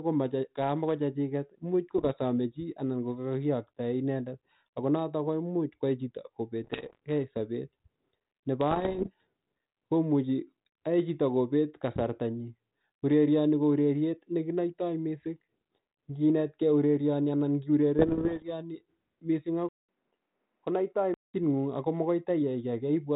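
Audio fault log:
1.98–2.11 s, 6.64–6.99 s (just after "komuch kwai chito"), 8.71–9.09 s and 17.98–18.45 s: bit errors on an ADPCM link. Roughly one bit in a hundred flips (less in the first burst). Each error throws off the decoder's step size and predictor, so it rings on as pops and rasping bursts with brief level jumps. The spectrogram shows vertical broadband streaks, and the waveform shows spiky, uneven envelopes.
19.69–21.34 s: input switched to a poorer device. The sound drops out for 200 ms, then returns duller and boxier, with nothing above 3.2 kHz. The level falls about 5 dB, and a new noise floor sits about 50 dB below the signal, likely from another microphone or headset. The spectrogram shows a gap, then a hard ceiling at 3.2 kHz. The waveform shows a smaller envelope.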